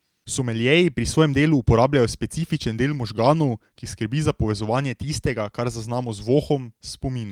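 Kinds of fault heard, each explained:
Nothing here stands out as a fault; it's just ordinary speech with no technical trouble to pick out.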